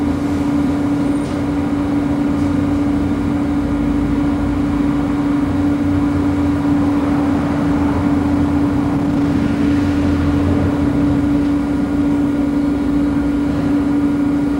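Jitter buffer speed-up occurs twice, from 8.35 to 10.01 s and from 11.04 to 12.35 s. Audio had piled up in the receiver's buffer beyond its target, so it trimmed many short pitch-period-sized pieces in succession to catch up. Pitch stays put while the sound hurries forward, at 118% speed in the first stretch (about a third of a second removed) and 106% in the second (about a tenth of a second).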